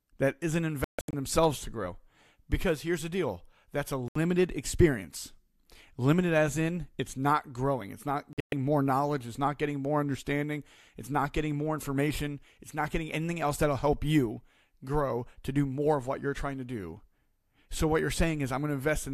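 The speech cuts to silence in brief holes at 0.84–1.14 s after "that isn't", 4.08–4.16 s after "the deal that's a", and 8.33–8.53 s after "not growing it's not", the first and last broken into several short gaps. This is digital broadcast dropout: the receiver muted while frames were corrupted, so that audio is lost.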